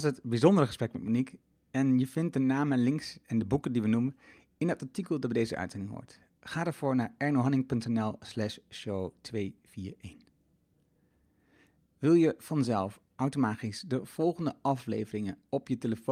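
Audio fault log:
No faults detected in the speech audio; nothing to log.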